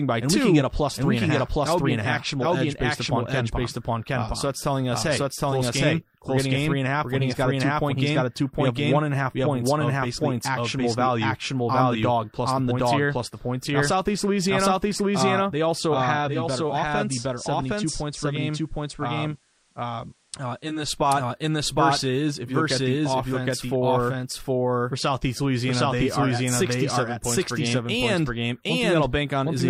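Throughout the speech, a doubled audio track trails about 0.7 s behind at roughly equal loudness, likely a second capture path. Unlike an echo, it has no decay or room colour.

From 16.13 to 20.99 s, digital radio blending to analogue cross-fades over 0.42 s to the FM signal. Level drops about 3 dB, and faint hiss appears, with no silent gap as in a dropout.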